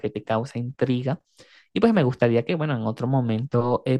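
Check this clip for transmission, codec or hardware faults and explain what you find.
I found no faults to report in this clip.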